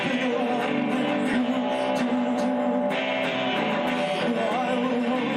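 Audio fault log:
1.33–1.35 s, skip ahead: A stretch of roughly seven-tenths of a second was discarded while later audio was already queued, as happens when packets are dropped in transit or a jitter buffer overflows and sheds its backlog. Playback leaps straight to the newer material with no silence or fill in between, so the sound on either side of the jump is spliced almost directly, and the listener hears an abrupt forward lurch where a chunk of the audio simply never arrives.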